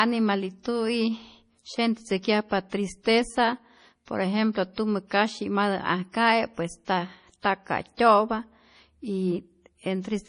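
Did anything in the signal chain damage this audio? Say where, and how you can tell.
Yes, at the codec: the speech sounds watery and swirly throughout with nothing above 10.5 kHz. That's likely heavy MP3 compression, fitting about 32 kbps, with the bit-starved encoder cutting treble and flickering weak bands.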